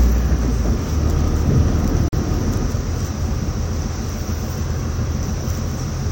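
At 2.08 s the audio drops out completely until 2.13 s, a gap between stream segments of roughly 46 ms. The silence has hard edges on both sides, so it reads as a sudden hole rather than a fade. Its position fits a segment boundary in a stream cut into 2-second pieces: the timestamps of adjacent segments do not meet, and the player pads the space with silence. Nothing is removed; the sound simply resumes slightly later.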